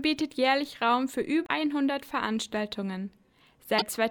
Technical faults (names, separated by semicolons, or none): damaged data in a compressed stream